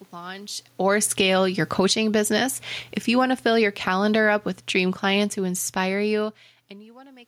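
From 0.72 s to 2.11 s the automatic gain falls by about 9 dB. The control has judged the input too loud and is pulling its gain down over more than a second, so the speech and the room noise behind it sink together. On a waveform the envelope tapers steadily, and on a spectrogram the whole frame, noise floor included, fades as one.

Overlapping this, from 1.28 s to 2.77 s, the automatic gain rises by about 5 dB. Having decided the level is now too low, the control swells everything back up over roughly one and a half seconds. The background breathes up along with the speech, which distinguishes it from the talker moving near 0.5 s. On the waveform the envelope widens gradually, and the spectrogram's noise floor brightens uniformly across frequency.

From 2.94 s to 6.37 s the automatic gain falls again, this time by about 10 dB and over more than three seconds. The slow, steady descent drags the room noise down with the speech. 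The waveform shows a long, even taper of the envelope, and the spectrogram shows the noise band darkening at the same rate as the speech. That shared fade separates it from the talker movement near 6.0 s, which changes only the speech level.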